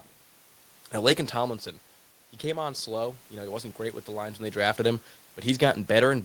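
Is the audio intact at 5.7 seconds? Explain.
Yes, the audio is intact at 5.7 seconds, with no fault at that moment.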